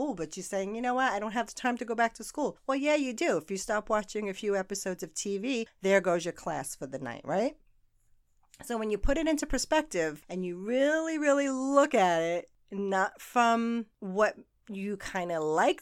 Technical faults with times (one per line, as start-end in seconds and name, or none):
none